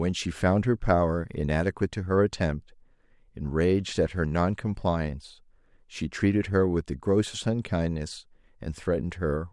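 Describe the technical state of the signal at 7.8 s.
At 7.8 s the speech signal is intact, with no audible technical fault at that moment.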